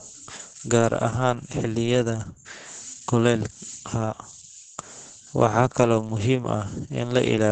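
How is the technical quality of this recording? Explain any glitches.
The quality is poor. Opus voice compression affects the whole clip: nothing is heard above 9 kHz. The speech sounds muffled, hoarse and slightly robotic. This fits SILK coding at a very low bitrate, around 10 kbps.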